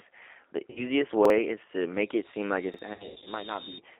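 Throughout the speech, the G.729 codec limits the line to about 300 Hz to 3.4 kHz and rebuilds each 10 ms frame from a filter, pitch predictor and a few pulses. The result sounds plainly rough and synthetic. A spectrogram shows an empty region above 3.4 kHz and smeared harmonics below it.

From 0.70 to 0.92 s, VoIP packet loss concealed by the speech codec fills a 60 ms gap, consistent with three lost 20 ms packets. The decoder stretches the last pitch and filter into a fading buzz, and the speech stays weak afterward. The spectrogram shows flat, repeated harmonics dimming over the gap.

At 1.25 to 1.30 s a repeated buffer plays the same 46 ms piece twice, which fits a 2048-sample buffer, and roughly 50 ms of audio is skipped. It is heard as a stutter with a hard join. The waveform shows an identical segment repeated after a sharp discontinuity.

From 1.93 to 3.82 s a loudspeaker feedback squeal grows at 3.7 kHz. 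The microphone–speaker loop gain exceeds one there, so the tone swells over about a second and a half to roughly 5 dB above the speech. On a spectrogram it appears as a single horizontal line that brightens steadily.

A second repeated buffer at 2.74 to 2.79 s doubles another 46 ms chunk, giving the same brief stutter. Then from 2.94 to 3.30 s further packet loss totals 200 ms, scattered over 320 ms with runs up to 80 ms. It produces choppy, buzzy, fading fragments, with patchy, washed-out bands on the spectrogram.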